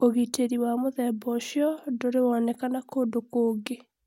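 No technical faults can be heard anywhere in this speech recording.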